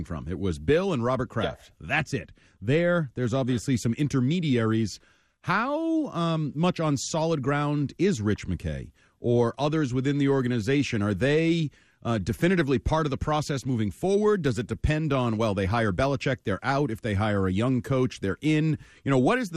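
MP2 compression is plainly audible throughout the speech, likely from MPEG Layer II coding at a rate that fits about 80 kbps. Short of bits across its 32 sub-bands, the codec drops upper bands and quantises the rest coarsely, leaving dull, gurgling, granular sound with flickering highs.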